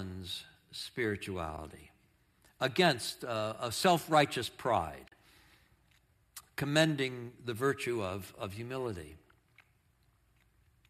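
At 1.57 s there's a brief soft dropout in the speech, then a longer one from 5.08 to 5.12 s. That's AAC frame loss with muting: the decoder zeroed the missing frames, and the overlapping windows fade the sound out and back in. The first hole fits a single 10 ms frame, the second about four. The light roughness in the voice is likely from the low-delay AAC compression.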